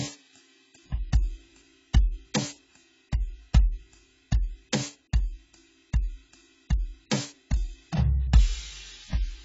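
AAC compression damage runs throughout this music clip: nothing sounds above about 7.6 kHz, so the top end is dull and airless, and the remaining spectrum is heavily smeared, with a warbling, fizzy texture on sustained tones. The likely cause is AAC-LC coding at a very low bitrate, which fits around 16 kbps. Starved of bits, the encoder discards the high bands and quantises what is left so coarsely that the spectrum breaks up.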